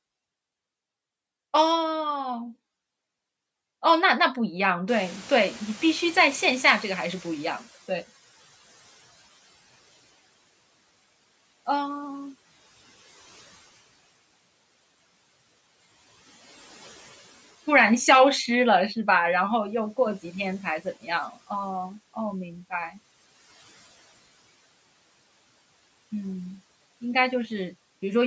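At 4.88 s the background noise jumps sharply and passes through with less reduction, then fades until 9.22 s, ending about 15 dB lower. This is the noise suppressor catching up: its noise estimate lagged the sudden rise, taking about 4.3 s to adapt.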